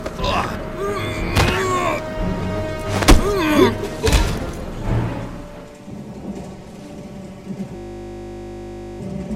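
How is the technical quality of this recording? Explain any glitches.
The recording has one clear glitch, a system hang loop from 7.76 to 9.0 s. The computer or its audio driver stalled while the sound hardware kept replaying the same 20 ms stretch of its buffer, some sixty times over. At a 50 Hz loop rate this comes across as a steady, mechanical buzz.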